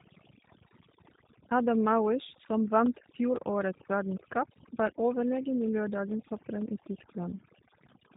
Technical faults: overdone noise removal; G.729 codec

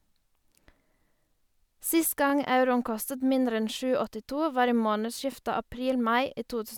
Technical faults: overlapping chunks

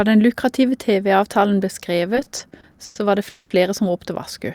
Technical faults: repeated stalls (stutter); call audio freeze

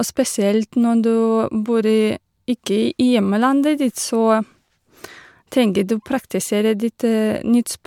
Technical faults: none

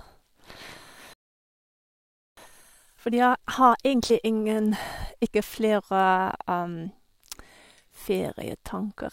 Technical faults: playback stall; time-compressed catch-up

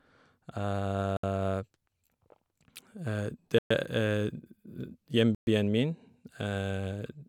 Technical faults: Bluetooth stall

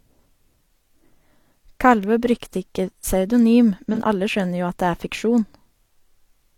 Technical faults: AAC frame loss with concealment

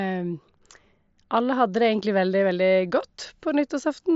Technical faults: none

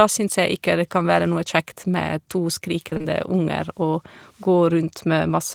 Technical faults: repeated packet loss (robotic sound)

